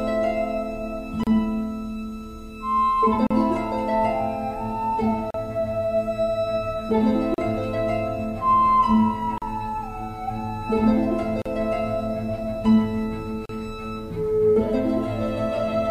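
At 1.24, 3.27, 5.31, 7.34, 9.38, 11.42 and 13.46 s the sound drops out briefly and then resumes where it left off: a gap at a join of encoded pieces, about 33 ms for the first and 38 ms for the rest, repeating every 2.0 s. Each 2 s segment was encoded on its own, and the encoder's start-up silence and final-frame padding were left in when the segments were joined. On a waveform each gap is a flat notch with slightly softened edges. A spectrogram shows it as a thin blank vertical stripe across all frequencies.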